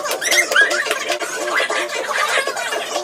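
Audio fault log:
throughout: wrong sample rate. Everything runs three times too fast and sits about 19 semitones high. Speed and pitch rise together by one fixed ratio, with no conversion step. That fits audio recorded at 16 kHz being played back at 48 kHz.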